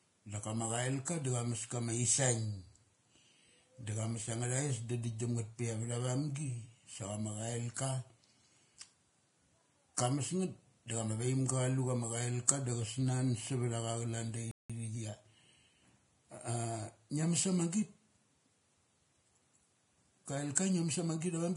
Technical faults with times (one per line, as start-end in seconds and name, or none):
0.00-21.56 Vorbis compression
1.05 pre-echo
10.87-10.90 pre-echo
14.51-14.70 playback stall
20.55 pre-echo